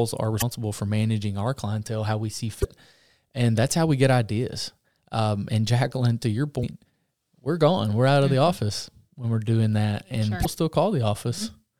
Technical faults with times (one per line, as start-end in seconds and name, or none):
0.38-0.43 damaged data in a compressed stream
2.60-2.65 damaged data in a compressed stream
6.60-6.64 damaged data in a compressed stream
10.41-10.46 damaged data in a compressed stream